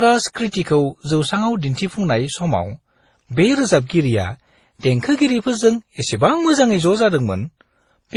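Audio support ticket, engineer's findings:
Speech band-limited throughout, hard ceiling at 11.9 kHz; nothing above it, with mixed coder artefacts stacked. Likely transcoding between lossy codecs: MP3, HE-AAC, then Opus, each re-coding earlier errors, consistent with roughly 32–40 kbit/s. Spectrogram: flat cut-off, blotchy upper bands.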